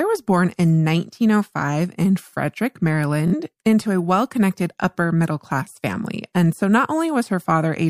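At 3.28 s, audio data was late or lost, and the receiver replayed its last buffer to fill the gap. This Bluetooth stutter runs until 3.34 s as a buzzing repeat, then speech resumes further on with 46 ms missing, which fits two lost frames.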